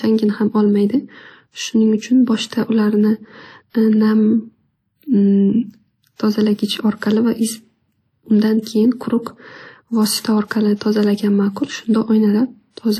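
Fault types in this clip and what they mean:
WMA compression: The speech has likely been through an early Windows Media Audio encoder running at a low rate, one that points to about 48 kbps. It quantises coarsely and drops weak spectral detail, so the speech sounds plainly washy and ringing, with hiss that rises and falls with it.
pre-echo: The codec spread quantisation noise sized for a sharp attack across its whole block, including the quiet stretch before the attack. From 10.76 to 10.81 s a short hiss runs 50 ms ahead of the onset, which arrives softened and smeared.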